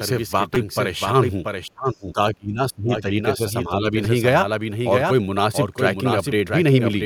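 Speech throughout carries a doubled audio track: a full-band copy roughly 0.7 s behind and about 5 dB quieter, with no room colour, likely from a second, slower capture path. Repeated buffer stutters occur at 0.55 s and 4.05 s, each a tiny piece replayed twice with hard joins and heard as a click or brief buzz, which fits a buffer of about 5 ms. Speech suppressed in double talk appears from 1.67 to 3.14 s, dipping by up to about 25 dB, and again from 3.37 to 3.94 s, dipping by about 5 dB, likely an echo canceller ducking the talker while the far side speaks.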